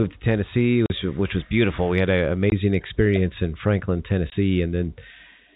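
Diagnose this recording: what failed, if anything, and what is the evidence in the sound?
Silent holes with hard edges at 0.86–0.90 s (before "which was beautiful"), 2.50–2.52 s (after "had an") and 4.30–4.32 s: network packet loss filled with silence, fitting 20 ms packets.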